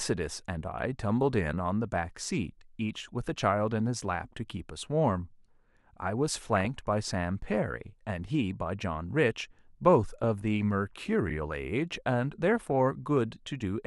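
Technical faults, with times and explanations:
6.57–6.66 s, 10.24 s and 12.48–12.72 s: DAB burbling. Short bursts of burbling sit over the speech. Weak reception lets bit errors slip past the error correction into the MP2 data, which fits a bit error rate of roughly 0.2 percent. Corrupted samples then put short blips of noise in single sub-bands, and corrupted scale factors make sub-bands leap in level for up to a frame.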